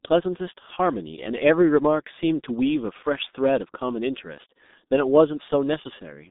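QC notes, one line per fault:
throughout: G.723.1 codec, heavy low-bitrate coding (fits about 6 kbit/s) keeps only 200 Hz to 3.7 kHz, leaving speech muffled, hoarse, consonants blurred.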